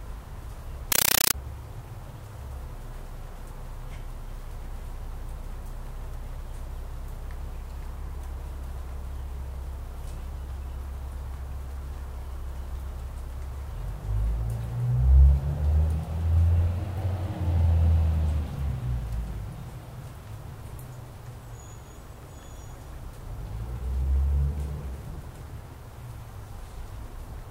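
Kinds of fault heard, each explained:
Compressed stream played as audio: for roughly 0.92 to 1.34 s the sound gives way to harsh, very loud chattering static. That's an AC-3 bitstream being treated as plain samples instead of being decoded. Each coded frame comes out as an 8 ms burst of noise followed by digital silence, repeating 31.25 times a second, which makes that rapid rattling texture. The density of the bursts points to a 384 kbps stream.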